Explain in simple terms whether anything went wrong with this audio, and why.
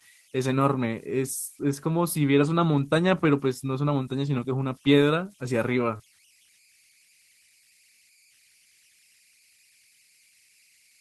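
Converter idle tones run through the whole recording as a faint whistle somewhere around 2 kHz, most noticeable in the pauses between speech. The part that turned sound into digital numbers had no added random noise to break up its patterns, so during quiet moments its output settled into a repeating cycle. That cycle is heard as a thin, steady tone that stays far below the speech.

Short concealed packet loss occurs between 5.97 and 6.01 s. About 20 milliseconds of the call arrived too late to be played. The receiving end covered the gap by carrying the previous sound forward for that moment, then blended back into the real audio. The result is a tiny smear or wobble in the speech rather than a gap of silence. The call connection is otherwise doing its job, and its normal compression leaves the sound slightly less crisp at the very top end.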